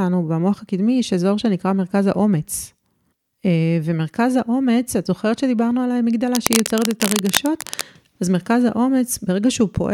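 From 6.34 s to 7.81 s, a dense, uneven scratching and rustling sits over the speech, only a little quieter than the speech itself, so it competes noticeably for that stretch. This is cable scratch noise, likely from a worn cable, connector or control being moved. As the contact shifts, its resistance changes rapidly, and those fast fluctuations get added to the signal as irregular bursts of noise for as long as the handling lasts.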